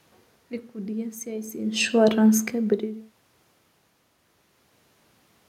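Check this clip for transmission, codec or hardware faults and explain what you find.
Nothing in this speech clip points to a transmission, codec or hardware fault.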